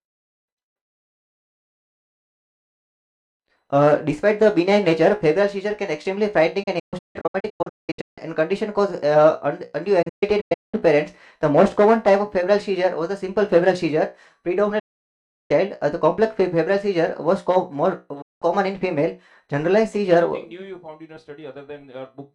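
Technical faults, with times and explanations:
6.63–8.18 s, 10.02–10.74 s, 14.79–15.51 s and 18.22–18.42 s, digital broadcast dropout: the receiver lost good frames and muted with an 8 ms fade. The first two gaps break into several short holes, the longest 192 ms. Whatever was sent during those holes is gone.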